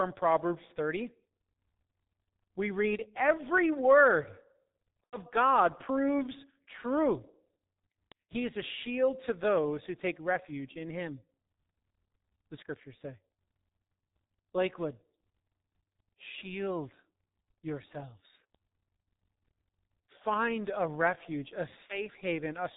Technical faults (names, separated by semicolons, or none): G.723.1 codec; VoIP packet loss concealed by the speech codec